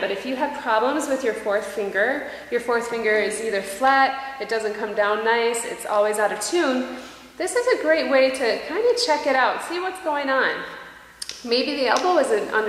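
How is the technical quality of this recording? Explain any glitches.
No glitches turn up anywhere in the recording. There is nothing technical to explain.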